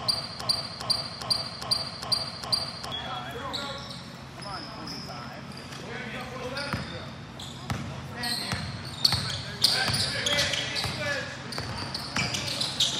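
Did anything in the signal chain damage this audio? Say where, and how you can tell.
Yes: a broken-record loop runs from the opening to 2.92 s, already under way when the audio starts. A 0.41 s fragment repeats exactly, back to back, six times. A stalled player, encoder or stream buffer likely kept resending its last chunk, so the audio belonging there is lost.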